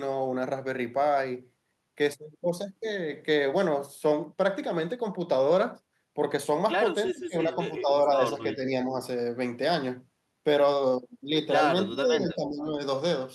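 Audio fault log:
7.12–7.54 s, 7.81–7.89 s, 8.54–8.99 s, 11.92–12.68 s: speech suppressed in double talk. The speech dips in level, about 25 dB at its deepest at 7.12 s, about 10 dB at 7.81 s and 11.92 s, and about 5 dB at 8.54 s. The likely cause is an echo canceller muting its own talker while the far side also spoke. Unlike a network dropout, the sound ducks and partly survives rather than vanishing abruptly.
7.2–7.24 s: echo leak. A brief, faint copy of the speech returns about 379 ms late, roughly 35 dB below the direct sound, likely residual loudspeaker pickup that the canceller missed. It is a delayed repeat of earlier sound, not a loss of the current speech, which separates it from the suppression around it.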